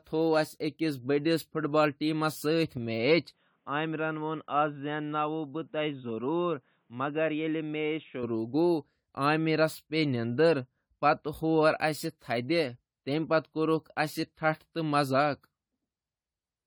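Across the whole recording the speech has a swirling, hollow, smeared quality with blurred consonant attacks. This is generation loss, likely from around five successive AAC-LC encodes at 64 kbit/s. The band still reaches 20 kHz, so the damage comes from accumulated artefacts rather than bandwidth cut by a low bitrate.

From 3.33 to 8.23 s the input switched to a poorer device, likely a headset or lesser microphone. Everything above 3.8 kHz vanishes, the level drops about 5 dB, and a faint new noise floor appears about 45 dB down. It switches instantly with no gap, then snaps back, which distinguishes it from steady codec band-limiting.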